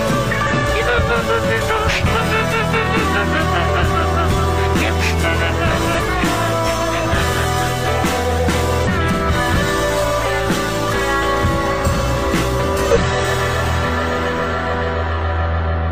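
Damaged data in the compressed stream makes the decoder misread a few frames and lose sync until it finds the next valid frame header. Each time, a short glitch of roughly 55 ms disrupts the audio. This happens at 0.47–0.52 s, 5.95–6.00 s, 6.04–6.09 s, 8.83–8.88 s and 12.91–12.97 s. The two hits near 6 s sit almost back to back, giving a double blip.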